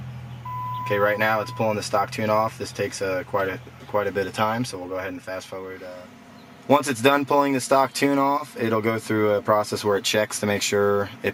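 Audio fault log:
Nothing stood out on listening to this recording.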